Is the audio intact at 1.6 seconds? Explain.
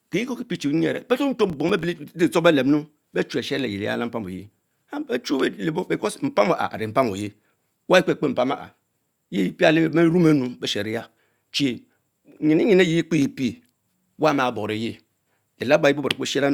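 No: processor overload crackle runs from 1.50 to 1.84 s, where missed deadlines leave short silent gaps of roughly 5 ms, heard as gritty crackle and seen as waveform dropouts with vertical spectrogram streaks.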